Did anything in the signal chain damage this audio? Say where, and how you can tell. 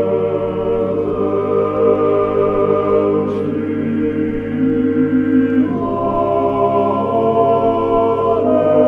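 No, nothing in the signal chain audibly damaged this audio; continuity and timing stay steady throughout, with no sign of trouble at any stage from capture to playback.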